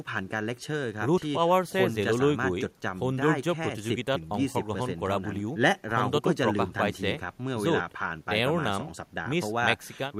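No technical faults are audible anywhere in this recording.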